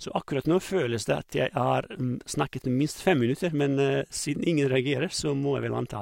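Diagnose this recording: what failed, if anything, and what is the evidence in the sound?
No fault detected in this recording.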